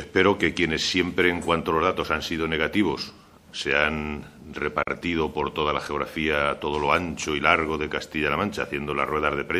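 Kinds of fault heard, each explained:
MP3 compression: Plainly audible damage runs through the whole clip, with a watery, swirling quality where quiet frequency components flicker in and out between frames and the top end sounds dull. That points to a low bitrate, around 64 kbps, as the likely cause. On a spectrogram the treble stops at a flat ceiling across the entire clip, and the upper bands break into patchy blocks that appear and vanish from frame to frame.
Gap at a join of encoded pieces: At 4.83 s a gap of about 41 ms opens in the sound, its edges smeared so the silent part is shorter, and then the sound picks up exactly where it left off. This is what happens when separately encoded segments are butted together without removing the encoder's start-up delay and end padding. The waveform shows a flat stretch of silence with smeared edges, and the spectrogram shows a narrow vertical blank strip cutting through every frequency.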